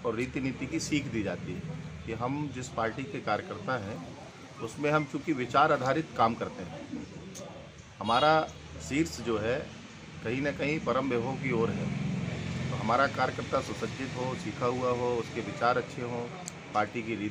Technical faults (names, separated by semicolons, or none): none